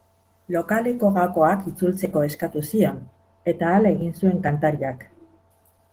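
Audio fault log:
Throughout: Opus voice compression. The speech has a plainly audible coded quality: a bit hoarse and faintly robotic, with the lower band coarsely rebuilt. The top end still reaches past 8 kHz, but it sounds thin and approximate rather than detailed. That fits hybrid mode, where the linear-prediction coder handles the main speech band and a separate transform layer roughly fills in above it, at a low rate somewhere around 16 kbps.
2.92 to 5.50 s: de-emphasis applied wrongly. For this stretch the speech suddenly goes dull and muffled, as if a blanket dropped over it. A treble cut meant to undo pre-emphasis has been applied where it does not belong, so the highs roll off smoothly, about 13 dB down at 10 kHz relative to 1 kHz. The consonants lose their edge, and the sound opens back up once the stretch ends.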